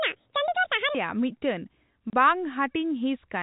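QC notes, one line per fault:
0.00–0.95 s, section at the wrong speed: The opening stretch was likely played against the wrong clock, running at 1.89 times the rate it was recorded. Because speed and pitch move together, the speech here comes out hurried and raised by around ten semitones, close to an octave, so it sounds squeaky and compressed in time. At 0.95 s it snaps back to its natural rate and pitch.
2.10 s, packet loss filled with silence: A 30 ms block of audio never arrived, and the receiver filled the gap with digital silence instead of concealing it. The gap length fits three lost 10 ms packets. The speech is cut by a brief hole with abrupt edges. The surrounding sound is narrowband and telephone-coded.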